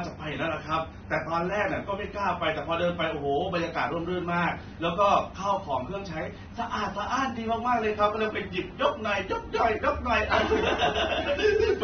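From start to finish the speech sounds dull and smeared, with a warbling, fizzy edge on sibilants and nothing above 6.3 kHz. The likely cause is AAC compression at a low bitrate, fitting AAC-LC near 24 kbps. On a spectrogram, energy stops abruptly at 6.3 kHz.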